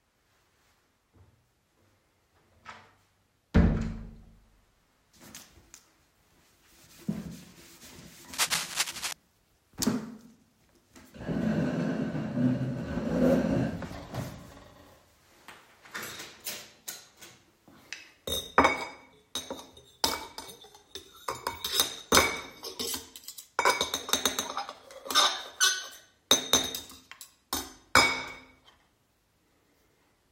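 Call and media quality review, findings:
Cable scratch noise, 8.33 to 9.13 s, about 0.8 s. Dense, irregular crackle and rustle over the sound, at roughly the level of the sound itself. Likely a worn cable, connector or control being moved, with contact resistance fluctuating rapidly and injecting uneven noise bursts into the signal path.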